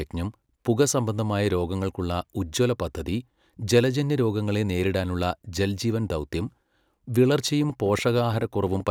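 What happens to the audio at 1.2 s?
Nothing goes wrong at 1.2 s; the speech runs through that moment intact, with no dropout, click or other disturbance.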